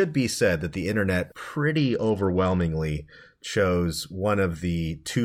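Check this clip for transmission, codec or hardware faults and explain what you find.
One fault is present, a Bluetooth SBC bit pool drop, from 1.77 to 2.63 s, just after "said that the internet". The link's SBC encoder had fewer bits per frame, which fits a bit pool cut from 31 to 10, near 77 kbps. The top sub-bands get few or no bits, dulling the treble, and coarse quantisation adds gritty noise until the rate recovers. Unlike a plain low-pass filter, the treble loss comes with that grit, and the audio doesn't drop out as it would with packet loss.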